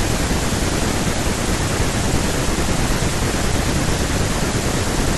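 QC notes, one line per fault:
Nothing stood out on listening to the speech in this clip.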